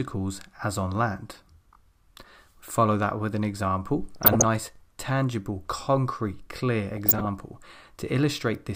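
From 4.16 to 4.46 s the sound breaks into burbling. This is DAB burbling: bit errors in a weak signal have slipped past the error correction into the MP2 audio, so corrupted samples put short blips of noise in single sub-bands and corrupted scale factors make sub-bands leap in level for up to a frame. The length of the disturbance points to about a dozen frames hit, at an error rate of about 0.7 percent.

From 4.76 to 4.78 s a brief stutter breaks in as roughly 21 ms of audio plays twice. These are overlapping chunks: the audio was handled in 3.0 s chunks, and this one began before the previous one had finished, so the join repeats a sliver of sound.

From 6.97 to 7.28 s the DAB burbling returns. This burst points to somewhat more frames hit than the first, at a lower error rate, under half a percent.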